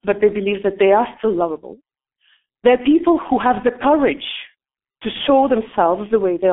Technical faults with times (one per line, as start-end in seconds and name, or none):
0.00-6.53 G.723.1 codec